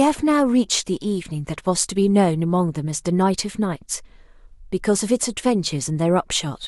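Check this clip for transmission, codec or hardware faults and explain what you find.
No transmission, codec or hardware fault can be heard anywhere in the speech, so the signal arrives technically intact.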